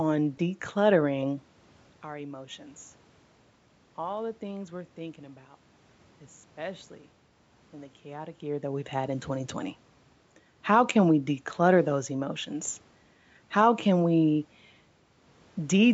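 No technical faults are present.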